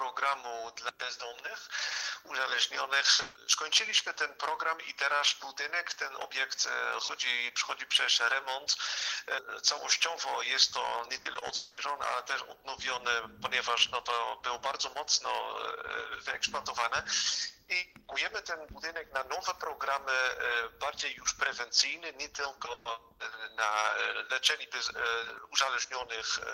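Burst of packet loss, 3.13 to 3.37 s: two bursts arrive back to back, 60 ms then 140 ms, so about 200 ms of audio never reaches the player. The receiver fills each hole by continuing the last sound it had and letting it fade, which gives a smeared, held tail before the audio resumes further on with that stretch missing.

Repeated packet loss (robotic sound), 11.21 to 11.51 s: four short holes, none longer than 40 ms, together cover about a third of this span, around 100 ms lost. Each is patched by repeating the preceding sound, and the next hole follows almost at once. The result is choppy, with small pieces of audio gone.

From 11.55 to 11.79 s, directly after that choppy patch, about 220 ms of audio is replaced by a continuation of the last sound, a buzz or hiss that fades but never reaches true silence. The audio then picks up later than where it left off. The likely cause is a long network dropout, with no packets arriving for roughly a quarter of a second.

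A further burst of packet loss at 22.73 to 22.87 s removes 120 ms, bridged by the same fading extension of the preceding sound before the stream jumps ahead.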